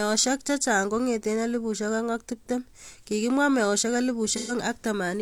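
AAC frame loss with concealment affects the speech from 4.30 to 4.52 s, consistent with about three lost frames. The decoder bridges the gap by rebuilding sound from the last intact spectrum, so this fifth of a second comes out as a smeared, noisy or phasey patch.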